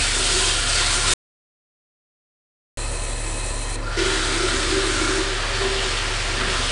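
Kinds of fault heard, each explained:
4-bit ADPCM compression: Each sample is coded as a coarse 4-bit step from a predicted value, so a gritty, level-following hiss rides on every loud passage throughout. Nothing above 10.6 kHz survives, which fits a low-rate stream near 88 kbps.
Audio dropout to silence: From 1.14 to 2.77 s the sound stops dead for about 1.64 s, leaving silence with no background at all. This is likely an input loss while the recorder kept writing silence, so that stretch is gone.
De-emphasis applied wrongly: From 3.76 s to the end, a treble roll-off meant for pre-emphasised material is applied to audio without it, or applied twice. The top slopes down to about 13 dB lower at 10 kHz than at 1 kHz, leaving that section dull and muffled.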